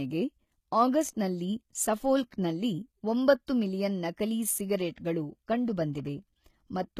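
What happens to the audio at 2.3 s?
At 2.30 s there is a pre-echo: the codec spreads quantisation noise across its transform block, so about 16 ms of short hiss precedes the attack, showing as a noise smear just ahead of the onset on a spectrogram. Underneath, the treble sounds gritty and rebuilt, and the spectrogram shows nothing above 14.9 kHz, likely from HE-AAC compression at a low bitrate near 20 kbps.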